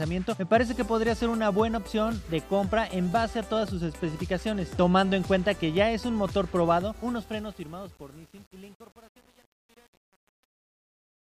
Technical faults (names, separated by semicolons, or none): truncation distortion on a fade